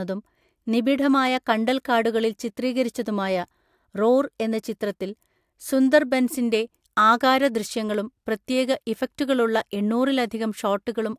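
No technical faults are audible anywhere in this speech recording.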